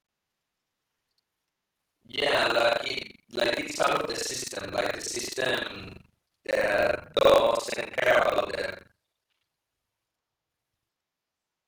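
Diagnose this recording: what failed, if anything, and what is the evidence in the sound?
A robotic rattle at 23.4 Hz runs through the speech from start to finish, present only with signal. This is buffer tearing at the driver or buffer stage. The ring-buffer writer and reader have slipped, so about two fifths of each period replays audio roughly a tenth of a second old, with hard joins on both sides. The rate fits a 2048-sample buffer.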